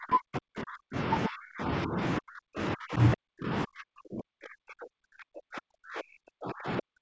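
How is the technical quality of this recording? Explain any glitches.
The speech is repeatedly pushed down, in deep dips of roughly 40 dB. This happens from 0.0 to 0.97 s, 1.28 to 1.98 s, 2.19 to 2.99 s, and 3.15 s to the end. The likely cause is speech suppressed in double talk. The echo canceller seems to mistake the talker for loudspeaker echo while both sides speak, and it turns everything down. The voice fades, thins or breaks into fragments. Nothing is heard above 8 kHz, as expected for a wideband call path.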